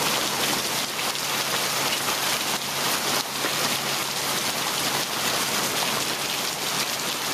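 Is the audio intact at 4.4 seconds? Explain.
No. A block size mismatch (truncated) runs throughout, including 4.4 s. The end of each block, which fits 512-sample blocks, is dropped. This gives a 109 Hz buzz and plays 1.16 times fast at near-normal pitch.

Gain pumping is also present there. The gain swings by about 5 dB, likely from excess gain feeding a fast limiter.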